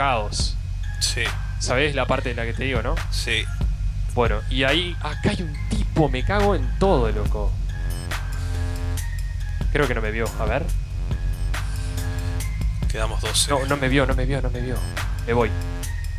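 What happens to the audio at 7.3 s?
Nothing goes wrong at 7.3 s; the audio plays through that moment intact, with no dropout, click, glitch or other fault.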